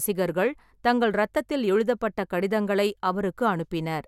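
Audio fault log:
Nothing to log here, as no audible problems turn up anywhere in the speech.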